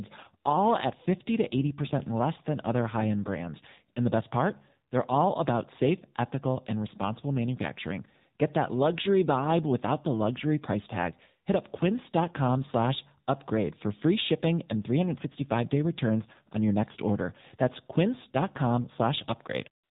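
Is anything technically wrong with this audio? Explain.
Yes, there are two faults. Throughout the speech, the AMR narrowband mobile codec limits the band: nothing above 4 kHz survives, and voiced sounds come out buzzy and synthetic. That degree of damage fits a low AMR-NB mode near 7.4 kbps, where a few pulses per subframe drive a coarse vocal-tract model.

From 19.84 s to the end at 19.93 s, AMR comfort noise takes over. The encoder judged the talker silent and stopped sending speech frames, so the receiver substituted smooth synthetic noise built from a rough level and spectrum estimate. The real background is replaced abruptly for roughly a tenth of a second.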